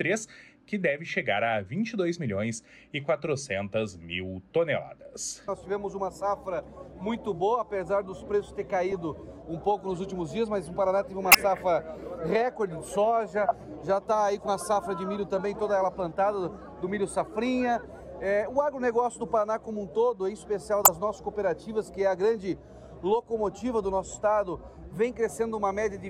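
The audio contains four stretches of corrupt frames decoded as if valid, at 8.92, 11.32, 13.48 and 20.83 s, each lasting roughly 40 to 80 ms. Flipped bits scramble gains and codes, so energy lands at wrong frequencies as brief chirps or noise bursts, peaking around -10 to -20 dBFS.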